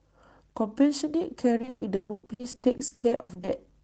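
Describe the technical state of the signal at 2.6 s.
At 2.6 s the signal is in the middle of repeated packet loss (robotic sound), which runs from about 1.57 to 3.49 s. Around twenty holes open in that stretch, the longest about 140 ms, adding up to roughly a second of missing audio. Each hole is bridged by extending the last received sound, so just over half of the span is concealment. The speech comes out choppy, with pieces dropped, within a band that tops out near 8 kHz.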